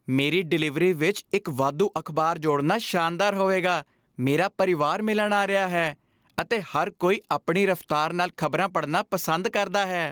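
Gain pumping runs through the whole speech clip: the gain ducks by around 10 dB under each loud syllable, likely from a fast limiter fighting overdriven input gain.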